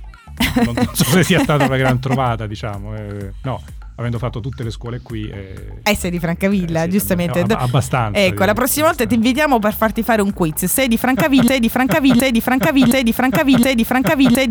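A broken-record loop begins at 11.48 s and runs to the end of the clip. A fragment about 0.72 s long repeats exactly, back to back, four times, so the same short stretch of sound cycles with no variation. This is likely a stall in the player, encoder or stream, which kept resending the last piece it held. Whatever should have played in those final three seconds is lost.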